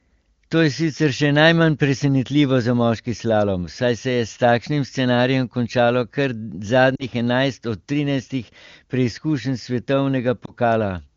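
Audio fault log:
6.95–7.05 s and 10.45–10.52 s, lost AMR speech frames: the decoder fills each gap by repeating the last good pitch and vocal tract settings at falling gain. The first gap spans about 40 ms, which fits two 20 ms frames, and the sound drops toward near silence within those two frames. The second spans about 20 ms, one frame, and gives a brief dip. In both, the speech returns weak or rough for a moment.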